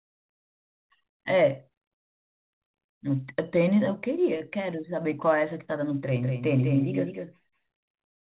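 The clip is speech carried over a narrowband call link, with nothing above 4 kHz, which fits G.711 mu-law coding. At 4.38 to 4.42 s there is short concealed packet loss. About 20 ms of audio arrived too late to play. The receiver extended the preceding sound to cover the gap, then blended back, leaving a brief smear. From 6.17 s to the end, a doubled audio track appears. A second full-band copy trails by roughly 200 ms, about 5 dB quieter, with no room colour. It starts abruptly, likely from the signal being captured again through a slower path.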